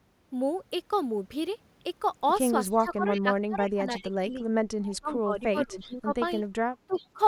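Speech with two recurring faults. Echo leak appears as faint delayed copies of the talker at 2.73, 3.13, 3.97, 5.8 and 6.93 s. Each copy trails by 354 ms and sits roughly 15 to 25 dB below the direct speech, likely from a far-end loudspeaker whose echo canceller let residual pickup return. Speech suppressed in double talk dips the talker by up to about 25 dB during 2.79–4.41 s, 4.88–6.14 s and 6.79–7.2 s. It is likely an echo canceller attenuating both the near talker and the echo while both sides spoke.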